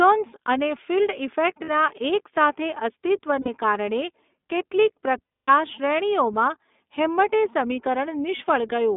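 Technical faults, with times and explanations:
Throughout, iLBC codec: the speech sounds thin and boxed-in, slightly rough and synthetic, with nothing above 3.6 kHz or below 200 Hz. iLBC codes each 20 ms frame's excitation on its own at about 15 kbps, which fits this plainly audible narrowband coarseness.
1.64 to 1.70 s, 3.40 to 3.48 s and 5.25 to 5.50 s, lost iLBC frames: each gap becomes a held, buzzy vowel-like tone, the first right after "અને ફિલ્ડ", the second just before "કારણે કેટલીક", and the longest, 240 ms, fading between "કારણે કેટલીક" and "શ્રેણીઓમાં હેમ્મટે". The decoder repeats the last pitch cycle with noise to fill missing packets, then recovers almost at once.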